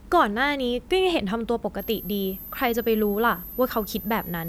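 From 1.79 s to the end of the clip, a switching supply whistle sits under the speech: a thin, high tone moving between about 11.9 and 12.5 kHz, roughly 15 dB below the speech. A switching power supply running in an audible burst mode, or beating against another converter, puts its switching frequency into the signal path. The pitch wanders as the supply's operating point shifts, which is why the tone drifts rather than holding steady.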